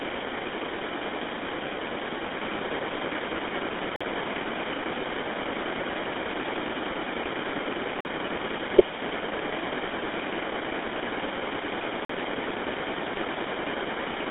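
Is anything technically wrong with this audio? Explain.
Yes, there are two problems: the speech runs through a GSM full-rate codec for the whole clip, and it is broken by three short gaps between chunks.

The GSM full-rate coding is present from start to finish. This codec models the vocal tract with a filter and excites it with a sparse, regularly spaced pulse train, discarding most of the excitation detail, at a rate that fits 13 kbps. The result is a plainly audible buzzy, gravelly roughness on the voice. The band is confined to roughly 250 Hz to 3.6 kHz, with nothing above 3.8 kHz, so the speech sounds thin and telephone-like.

The gaps between chunks fall at 3.96 to 4.01 s, 8.01 to 8.05 s and 12.05 to 12.09 s. Each is a 44 ms hole of silence, and they repeat every 4 s. That spacing shows the audio was handled in 4 s blocks, with silence inserted at each join, likely from codec padding or late playback of each chunk. 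Nothing is missing from the speech itself, but each join interrupts it with a short hole.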